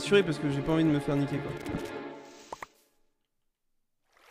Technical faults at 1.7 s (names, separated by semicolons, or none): loose connector crackle